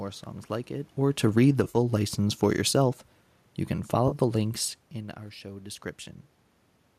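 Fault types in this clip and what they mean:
Automatic gain falling: The gain control judged the input too loud. From 1.19 to 3.09 s, after "songs like it or", level and background sink about 4 dB.
AAC frame loss with concealment: Lost frames were patched from the last good spectrum. Smeared, phasey patches appear near 1.64 s and at 4.08 s, before "the links in our".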